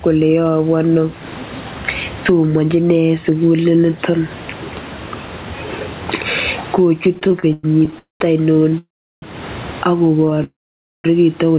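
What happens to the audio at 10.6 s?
Packets were likely held up and the jitter buffer ran dry, causing a call audio freeze from 10.44 to 11.06 s. A brief fading continuation collapses into about half a second of silence, and the audio resumes late at "chito kole" with nothing missing. Gain pumping is also present, likely from input gain set far too high with a fast limiter. The level swings by roughly 15 dB.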